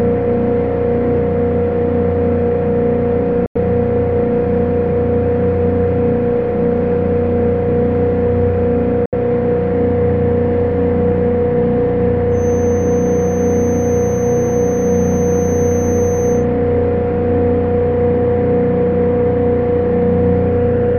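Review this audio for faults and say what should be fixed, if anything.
Two short gaps of silence cut into the sound, from 3.46 to 3.57 s and from 9.06 to 9.15 s. The sound resumes as though it had carried on underneath. This is a Bluetooth dropout, likely from audio packets reaching the headphones too late and being discarded. The first gap's length fits four lost frames and the second's fits three. On a waveform each shows as a flat, near-zero stretch with abrupt or briefly faded edges; a spectrogram shows a clean vertical blank band. Keeping the wireless link short and unobstructed, or buffering more, would prevent it.

From 12.29 to 16.47 s a thin, steady whistle at 6.2 kHz sits roughly 20 dB below the sound, swelling and fading slowly in level. This is a feedback whistle, likely a loudspeaker-to-microphone loop held just at the edge of feedback, so one high frequency keeps ringing without building up. 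A spectrogram shows it as a narrow horizontal line at 6.2 kHz across those four seconds; the waveform barely changes because the tone is so much quieter than the sound. Lowering monitor gain or notching 6.2 kHz would stop it.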